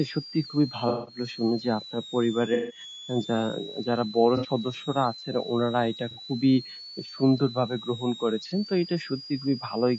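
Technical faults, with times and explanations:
Throughout: switching supply whistle. A power supply is bursting or beating in the audible range, leaving a whistle near 4 kHz that wanders between 3.3 and 4.8 kHz, about 15 dB below the speech.
Throughout: low-delay AAC compression. The short-frame low-delay codec likely starved of bits, consistent with roughly 32 kbps, so harmonics blur and the speech sounds rough and grainy with noisy, synthetic highs.
0.89–1.18, 2.54–2.80, 4.37–4.48, 6.11–6.20, 8.48–8.52: AAC frame loss with concealment. Lost frames (from 180 ms down to 30 ms) were patched from earlier spectra, giving smeared, noisy, phasey gaps, worst in the first two.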